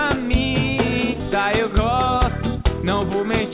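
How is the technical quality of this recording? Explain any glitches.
The recording has one clear glitch, a skip ahead, heard through a call-grade channel with nothing above 4 kHz, consistent with G.711 mu-law narrowband audio.

At 1.2 s a skip ahead occurs. Roughly 0.4 s of audio was discarded while later audio was already queued, so playback jumps forward with no gap and the two sides are spliced directly. It sounds like an abrupt lurch. The waveform shows no silence at the join. On a spectrogram it appears as a hard vertical seam where the patterns fail to continue.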